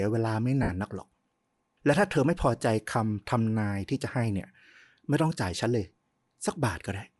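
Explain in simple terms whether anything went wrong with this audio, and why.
Yes, two things went wrong. The audio was most likely squeezed through Bluetooth LC3 compression, the codec used by Bluetooth LE Audio. To save data, it drops much of the high end and fills it with noise, so the speech sounds grainy and breathy all the way through.

There are also lost LE Audio frames from 0.63 to 0.69 s, a gap of about 60 ms. The receiver filled it by repeating the last bit of sound with scrambled detail.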